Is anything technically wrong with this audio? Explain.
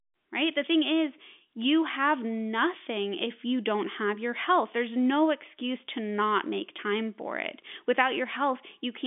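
No, nothing stood out as wrong on listening, and the narrow telephone-line sound, with nothing above about 3.7 kHz, is simply what G.711 telephone coding does to speech.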